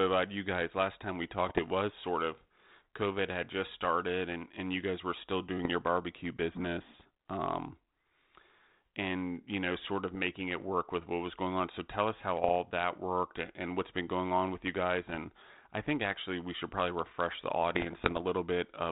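Bit errors on an ADPCM link break up the speech at 1.48–1.60 s, 5.58–5.66 s, 10.11–10.19 s, 12.44–12.56 s, 15.07–15.19 s and, longest, 17.75–18.24 s. Each corrupted code throws off the decoder's step size and predictor, so a pop is followed by a short, rough, gritty burst and a brief change in level before it settles. The error rate is low, well under one percent, on a narrowband link consistent with 32 kbit/s G.726.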